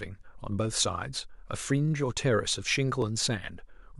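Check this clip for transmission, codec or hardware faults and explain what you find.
There's one fault in this speech clip, a dropped buffer (overrun) at 3.02 s. You hear the sound jump ahead a millisecond or two. Most likely the software didn't read its samples in time, the hardware overwrote them, and the two sides were spliced together with no gap.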